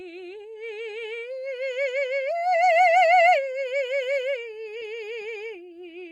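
At 4.80 s, short concealed packet loss: about 10 ms of the music never arrived, and roughly 6 ms was synthesized from the preceding sound, leaving a brief smear.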